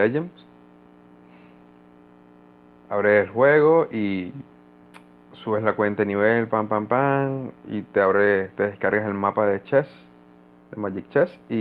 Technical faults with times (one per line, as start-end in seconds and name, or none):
none